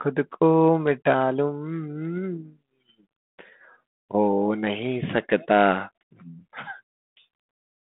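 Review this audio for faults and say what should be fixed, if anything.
Nothing here needs fixing: the speech comes through a telephone-style path consistent with G.726 ADPCM at 32 kbit/s, with the line band running from about 150 Hz to 3.6 kHz and no content above roughly 3.8 kHz, as that coding path would leave it.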